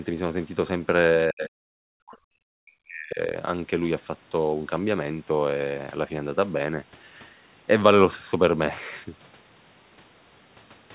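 The speech clip shows speech suppressed in double talk between 1.29 s and 3.2 s. The likely cause is an echo canceller that, with far-end sound playing on the loudspeaker while this side spoke, could not tell the local talker from its own loudspeaker echo and attenuated both. The local speech is pushed down by around 40 dB at its deepest, for about a second and a half in total within that span. The call path's band limit is audible throughout, with nothing above 4 kHz, which fits G.711 narrowband coding.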